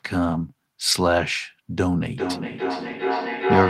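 At 0.91 to 0.93 s the speech turns briefly rougher and noisier for 20 ms without any gap: a lost packet rebuilt from error correction, where the decoder played the low-bitrate copy carried in the following packet instead of the missing original.

From 2.17 s to the end, the speech comes back around roughly every 0.4 s, each return thinner and more ringing. The repeats reach about 2 dB below the direct speech. This is feedback echo between two devices: one device on the call replays what the other's microphone sent, that microphone captures it again, and neither echo canceller removes sound played by the other device.

Inside that echo, at 2.87 to 2.93 s, a second rebuilt stretch lasting 40 ms sounds similarly coarse and noisy, which fits two separate packets recovered from forward error correction.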